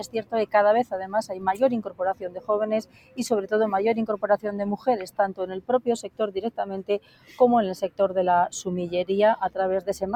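From the start, a noise suppressor built for speech has been applied to these sounds. It treats steady content as noise, so the level pumps over a swing of around 15 dB. Attacks mostly get through while held notes and tails sink.

Sound cut by the noise suppressor then sinks steady and decaying parts at 0.06–0.54 s, 1.29–1.54 s, 1.85–2.49 s, 2.83–3.18 s, 5.09–5.44 s, 6.05–6.2 s and 6.99–7.4 s. Most cuts go down by about 14 dB, with only about 8 dB at 1.29 s. These are not dropouts, because the transients survive.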